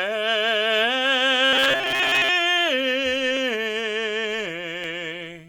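From 1.45 to 2.29 s, robotic sound from repeated short buffers: a rigid 133 Hz buzz, likely a looping 7.5 ms chunk, not the silent gaps of dropouts.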